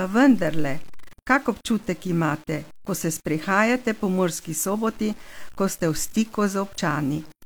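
From start to finish the speech carries a grainy, gritty edge that rises and falls with the voice itself. This points to low bit depth without dither, likely caused by truncating the audio to about 7 bits with no dither added. The error sits only about 30 dB below the signal and tracks it closely, roughening quiet syllable tails.

From 6.74 to 6.79 s, a short disturbance lasts about 50 ms. This is damaged data in a compressed stream. Corrupted bytes made the decoder misread those frames and lose sync until it found the next valid frame header.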